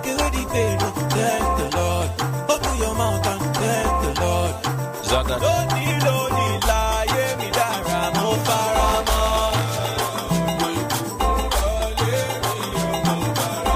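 Buffer tearing from 8.88 to 9.89 s: the program writing the ring buffer and the hardware reading it have slipped, so each buffer carries a small sliver of audio around 20 ms old, hard-joined to current sound. This produces a robotic buzz at 93.8 Hz, which fits a 512-sample buffer.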